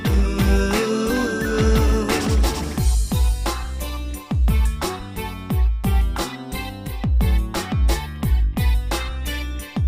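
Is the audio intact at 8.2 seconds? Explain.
No. At 8.16 s there is a single sharp click, heard as a brief tick. The likely cause is dropped samples: a fraction of a millisecond of the stream is missing, so the waveform jumps from one value straight to a later one instead of moving smoothly between them. That gap is far too short to remove any audible sound. On the waveform it shows as a sudden step, and on a spectrogram as a thin vertical line spanning the frequency range.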